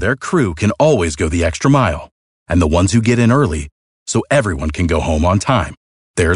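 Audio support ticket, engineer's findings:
No faults found on listening; speech clip checked end to end, nothing to attribute to capture, processing or transport, no action required.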